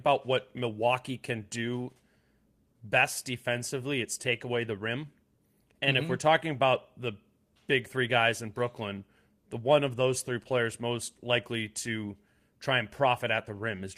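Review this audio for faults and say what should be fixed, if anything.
I found no faults in this audio, so nothing needs to be fixed.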